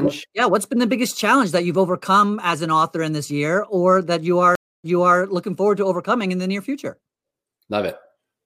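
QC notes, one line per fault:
4.55–5.19 s, stream reconnect: after "year or that you" the audio drops to silence for 285 ms, then resumes 348 ms earlier, repeating material before "looking forward to overcoming", as the player reconnects and a fresh decoder starts on a resent burst.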